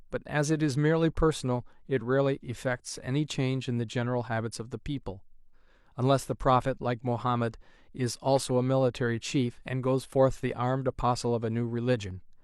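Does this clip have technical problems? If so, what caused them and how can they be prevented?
No, the speech signal shows no technical problems, so there is no cause to identify and nothing to prevent.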